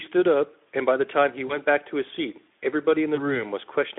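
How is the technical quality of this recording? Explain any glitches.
Two glitches interrupt the speech, both VoIP packet loss concealed by the speech codec, over a narrowband line whose light Speex coding fits roughly 15 kbps. At 1.47 to 1.58 s and 3.15 to 3.43 s the speech smears into a fading buzzy tone or coloured noise and stays weak afterwards. A lost packet, consistent with a single 20 ms frame, made the decoder extrapolate from its last pitch and filter, and recovery dragged on as each frame built on the damaged one.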